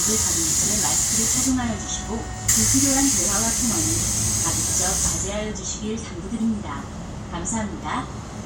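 Sounds, no audible faults.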